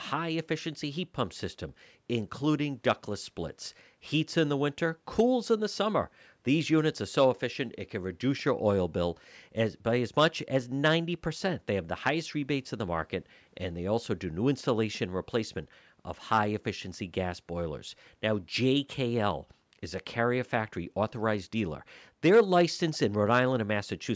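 No technical faults heard.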